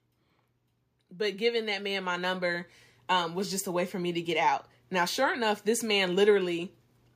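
From 1.09 s to 4.37 s you can hear automatic gain rising: the level control decided the input was too quiet and slowly cranked its gain up by about 10 dB. Because it's boosting the whole signal, the voice and the room noise behind it swell together over those three-odd seconds, so the background noise creeps up right alongside the speech instead of staying put. It's a gradual lift, not a jump.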